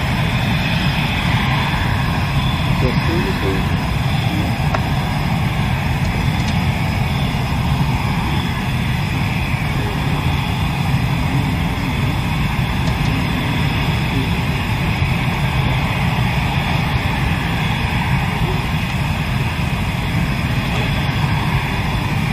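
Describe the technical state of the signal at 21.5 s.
At 21.5 s the signal is intact, with no audible fault at that moment.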